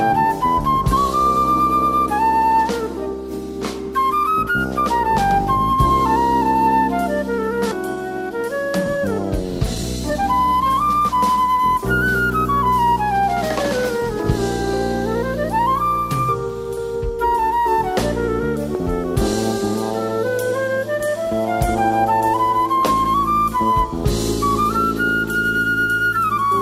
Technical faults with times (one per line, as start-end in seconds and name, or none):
7.71-7.73 skip ahead
8.00-11.60 jitter buffer speed-up